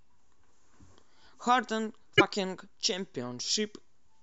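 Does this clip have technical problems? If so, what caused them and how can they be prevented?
Yes. From 2.16 to 2.21 s the speech skips forward and about two frames' worth (26.1 ms each) decode wrongly. That points to a broken MP3 bit reservoir, likely from frames cut out, whose successors borrowed bytes from them. A simple dropout would leave a gap without the damaged frames after it. Cutting MP3 only at reservoir-safe frame boundaries, or editing before encoding, prevents it.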